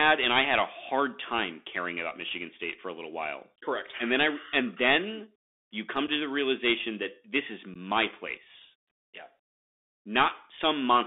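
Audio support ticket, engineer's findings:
Bluetooth CVSD headset codec, whole clip: speech squeezed through the one-bit delta coder, band limited to about 250 Hz–3.6 kHz (fits a 64 kbit/s link), giving scratchy sibilants, distorted loud highs and granular hiss.

Unconcealed Bluetooth headset packet loss: headset link dropped voice packets with nothing filling the gaps. Holes at 6.07 s (7.5 ms, about two packets) after "and then you come", and 7.74–7.76 s (15 ms, about four) after "realization that this is". Both have abrupt edges.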